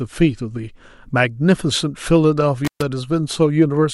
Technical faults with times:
2.65-2.83 intermittent contact

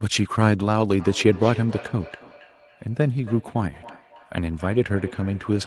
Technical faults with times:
0.99-5.67 feedback echo between two devices

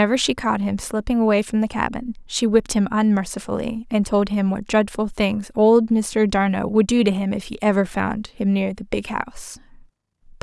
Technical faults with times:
none

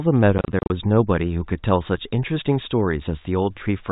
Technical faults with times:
0.38-0.70 packet loss filled with silence

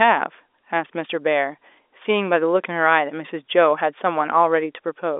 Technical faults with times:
none

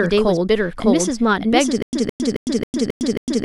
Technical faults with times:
0.00-3.44 doubled audio track
1.82-3.44 stutter with silent gaps

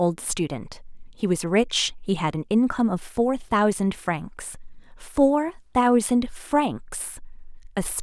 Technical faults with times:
none

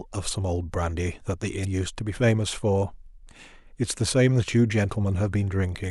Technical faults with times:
1.61-1.65 damaged data in a compressed stream

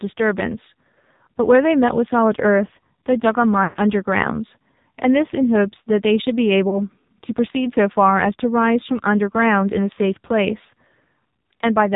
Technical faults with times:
0.00-11.96 AMR narrowband mobile codec
3.64-3.79 lost AMR speech frames
6.70-6.83 lost AMR speech frames

